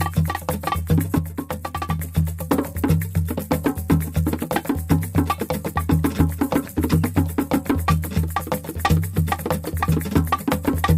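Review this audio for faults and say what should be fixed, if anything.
A sudden gain jump drops the sound and its noise floor by about 6 dB from 1.18 to 1.99 s, likely an unramped gain change. The waveform halves abruptly, and the spectrogram dims uniformly. Ramp every gain change over a few milliseconds.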